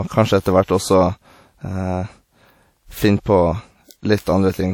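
Speech, encoded with what is likely a low-rate WMA compression. A simple transform encoder working at a rate that fits about 48 kbps has coarsely quantised the spectrum, zeroing weak components and leaving nothing above 19 kHz. The damage is plainly audible as a ringing, washy quality, with hiss that swells and fades along with the sound. The same long transform blocks cause a pre-echo from 0.41 to 0.45 s. The quantisation noise meant for a sharp attack is spread back across the quiet 43 ms before it, so a brief hiss leads into the onset and the attack itself sounds soft and smeared.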